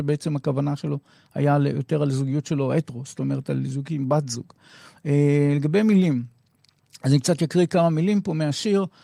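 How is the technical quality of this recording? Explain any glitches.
No glitches or technical faults can be heard anywhere in the recording.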